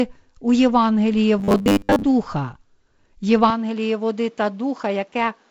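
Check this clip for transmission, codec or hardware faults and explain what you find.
Two faults stand out, over a wideband telephone-coded speech track whose light upper-band hiss and roll-off a little above 7 kHz fit G.722 at its lowest rate.

From 1.39 to 2.05 s there is robotic sound from repeated short buffers. The speech becomes a rigid metallic buzz at 100 Hz, which fits a 10 ms chunk being replayed while most of the real audio is skipped. The likely cause is audio arriving too seldom. Unlike codec warble, the buzz rate stays fixed while the speech contour survives only loosely.

At 3.50 s the input switches to a poorer device, and it stays there until the end. With no gap at the switch, the level drops by about 5 dB, a new noise floor appears about 35 dB below the speech, and the band narrows, likely from a changed microphone or headset profile. Unlike a dropout or a codec change, the tone and noise shift abruptly and then persist.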